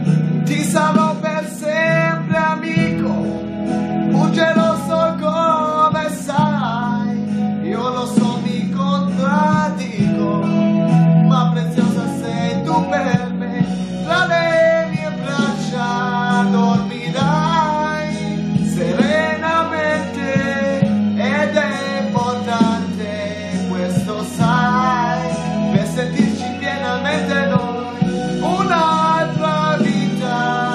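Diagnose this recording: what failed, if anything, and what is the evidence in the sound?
The fault sits at the codec and storage stage: damaged data in a compressed stream, between 24.02 and 24.04 s. Part of the encoded stream there was corrupted, so the decoder misread or dropped those frames and had to hunt for the next valid frame header before the sound carried on.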